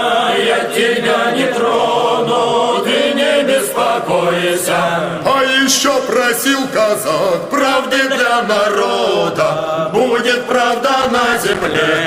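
Right near the end, from about 11.01 to 11.82 s, there's a burst of loose connector crackle, roughly eight-tenths of a second of it. What's going on is a worn or grubby contact somewhere in the chain that keeps making and breaking as it shifts, so the signal gets chopped up in quick, uneven bursts. You hear it as ragged scratching and crackle sitting on top of the sound until it lets go.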